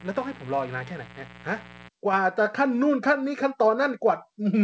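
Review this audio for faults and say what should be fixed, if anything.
Mains buzz runs from 0.00 to 1.89 s. Switching spikes, twice per 60 Hz cycle, spread harmonics into the kilohertz range as a raspy layer somewhat below the speech. Fix it by shielding the microphone cable and keeping dimmers and cheap power supplies off the recording circuit.

Microphone volume stepped up at 2.13 s. The call software raised the input gain in a single jump of about 4 dB, so speech and background grow louder together. Fix it by setting the microphone level manually and disabling automatic gain adjustment in the call software.

The band-limiting to 8 kHz heard throughout points to a G.722 call codec.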